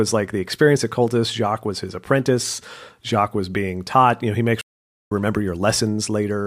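At 4.61 s the speech cuts out in mid-flow and the output goes completely silent for about 500 ms, until 5.12 s, when the sound resumes. This is a playback stall. The gap is a hard dropout rather than a fade, and it sounds like the player froze. The likely cause is that the player ran short of buffered data or its audio thread was briefly blocked, leaving nothing to send to the output until it recovered.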